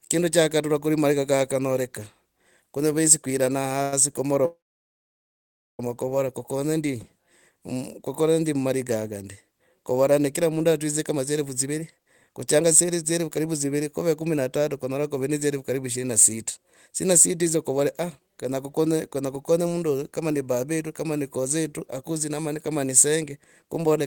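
A call audio freeze at 3.82 to 3.93 s fills about 0.1 s with a brief fading buzz, likely from delayed packets draining the jitter buffer. Nothing is lost, only postponed. A second call audio freeze at 4.45 to 5.80 s is likely caused the same way. The continued sound fades into about 1.2 s of silence, and the audio then resumes intact with "kuvora kukonye ndi", 1.3 s late.

A jitter buffer speed-up runs from 10.99 to 13.82 s, between "ne kira mundu" and "ne kuve kumi na". The receiver trims pitch-period slices, roughly 0.4 s in total, so the speech plays 14% faster at unchanged pitch and sounds hurried. Another jitter buffer speed-up follows "kunyora kuve ne dzielfu", lasting from 15.75 to 23.85 s. It plays 7% fast and trims about half a second overall to shrink the excess delay.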